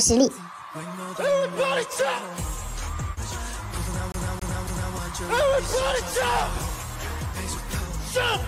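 At 4.12 s the audio sticks like a CD stuck on one turn: a scratch sends the laser back one track, so the same 0.27 s fragment plays three times through 4.94 s, each jump marked by a brief mute, giving a fast, even stutter.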